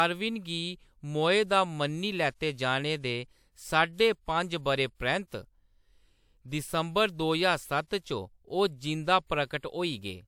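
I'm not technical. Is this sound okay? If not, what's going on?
No. Throughout the speech there is a mix of different compression flaws heard together, like two layers of distortion sitting on top of each other. This is transcoding between lossy codecs. The recording was likely squeezed into an MP3 file and then squeezed again into a WMA file. The second step spends effort copying the first file's flaws and adds its own. The highest pitches stop around 20.1 kHz, about the upper limit of hearing, so little top end is lost.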